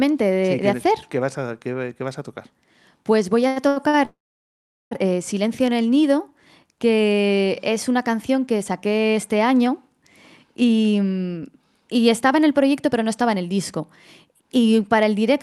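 Speech carried over a call path whose Opus coding limits the top end to about 12 kHz has a run of three held, slightly buzzy sounds at 3.47, 3.68 and 3.88 s. Each is a short stall from a late packet: the jitter buffer ran dry, and the receiver stretched the last sound for 87, 82 and 50 ms before resuming where it left off. Right after, from 4.05 to 4.93 s, the audio fades out and sits silent for about 0.76 s of a roughly 0.86 s hold, then continues with nothing lost. This call audio freeze was likely caused by packets held up in transit. Later the speech sounds hurried at normal pitch, running about 7% fast from 10.48 to 13.81 s and 8% fast from 14.33 to 14.72 s, just before "para el". This is a jitter buffer speed-up, in which the receiver trimmed repeated pitch-period slices, roughly a third of a second in the first stretch and a few tens of milliseconds in the second, to shrink the built-up delay.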